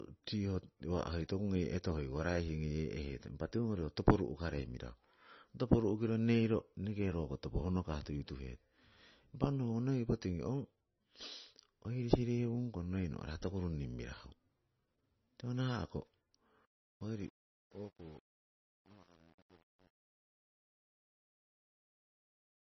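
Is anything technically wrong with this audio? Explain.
Yes. Throughout the speech, nothing reaches above 5.9 kHz, and the sound is watery and swirly with smeared consonants. This is likely heavy MP3 compression at a very low bitrate, around 22 kbps. The encoder drops the treble at a fixed cutoff and lets weak frequency lines flicker between frames. On a spectrogram this appears as a flat ceiling at 5.9 kHz with patchy, blinking detail below it.

From 16.65 s to 22.64 s there is truncation distortion on a fade. The fade-out starts around 16.7 s and runs to the end at 22.6 s. The quietest part turns gritty, which fits a stage keeping only about 9 bits without dither. On the waveform the tail looks like coarse square steps. On a spectrogram it shows as broadband hash.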